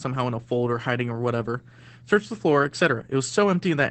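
Throughout, Opus voice compression caps the speech at 8 kHz and codes it coarsely, suggesting about 12 kbps. Unlike plain filtering, it sounds hoarse and slightly robotic.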